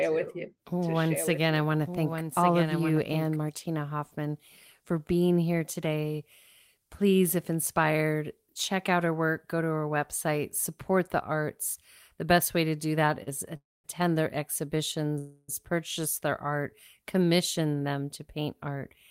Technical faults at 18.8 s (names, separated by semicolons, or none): jitter buffer speed-up